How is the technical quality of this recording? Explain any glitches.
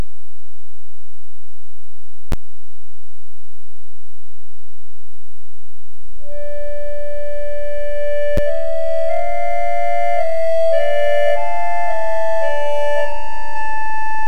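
There are two clear problems. A doubled audio track runs through the whole recording: a second copy sits roughly a second and a half behind, about 5 dB quieter, likely from a slower capture path.

There are also two blocks of digital silence, at 2.32 s (11.6 ms, which fits a 512-sample buffer) and at 8.37 s (8.6 ms). Output likely wasn't filled in time, so each drops to zeros, heard as a tick or dip.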